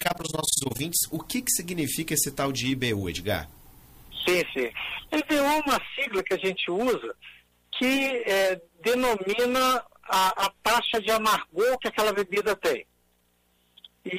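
Overlap-add ripple from 0.0 to 0.8 s: the level pumps around 20 times a second with about 60 dB dips, a steady robotic flutter locked to the frame rate rather than irregular dropouts.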